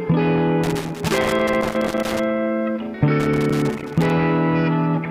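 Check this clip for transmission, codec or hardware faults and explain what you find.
A loose connector crackle appears twice, from 0.64 to 2.24 s and again from 3.2 to 4.1 s. A worn or dirty contact in the signal path is making and breaking as it shifts, chopping the audio into an irregular burst of scratchy crackle.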